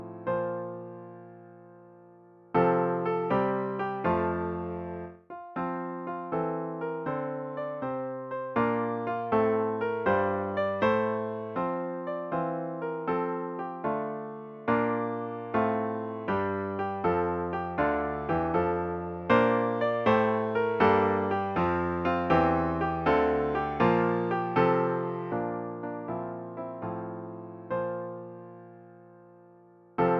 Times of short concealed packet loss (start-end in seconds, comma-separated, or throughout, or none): none